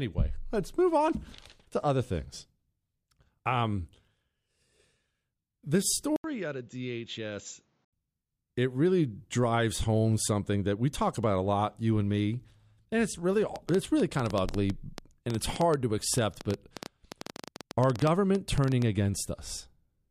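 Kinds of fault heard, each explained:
Input switched to a poorer device: from 6.16 to 7.93 s the sound turns dull and boxy, with nothing above 7.6 kHz, after an 80 ms gap. The level falls about 10 dB and a faint new noise floor appears, pointing likely to another microphone rather than a simple filter.
Train of clicks: just after "me and it's really", from 13.56 to 18.83 s, around fifty same-shaped pulses tick over the sound at 8.93 per second, unevenly spaced and well above the signal. This is likely interference, and the matching shape sets it apart from random crackle.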